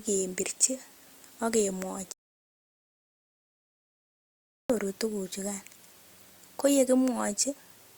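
An audio dropout to silence runs from 2.12 to 4.70 s, about 2.58 s of speech lost. The signal cuts off mid-flow into silence with no room tone, then resumes abruptly, most likely because the input feed was interrupted while the recorder kept writing zeros.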